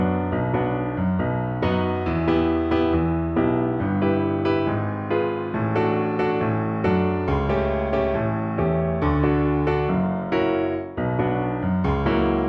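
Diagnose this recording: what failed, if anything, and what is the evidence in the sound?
Nothing failed; no stage in the chain leaves any audible mark anywhere in the recording.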